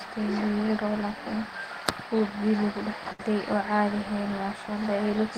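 A burst of packet loss hits this speech at 3.12 to 3.20 s. Several consecutive packets, or one long one, never arrived in time, so the receiver filled the hole by stretching the last received sound for about 64 ms while lowering its level. That gives a brief smeared, fading tail in place of real speech. When the stream picks up again, about 70 ms of the original audio has been skipped, and the sound jumps ahead abruptly.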